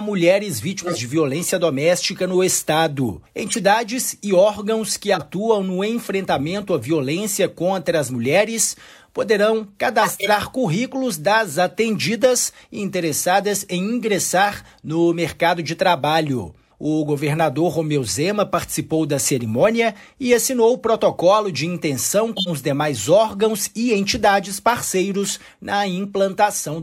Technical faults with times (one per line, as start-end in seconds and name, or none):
0.82-0.98 corrupt frame decoded
3.47-3.59 corrupt frame decoded
5.14-5.23 corrupt frame decoded
10.01-10.29 corrupt frame decoded
22.36-22.49 corrupt frame decoded
23.82-23.93 corrupt frame decoded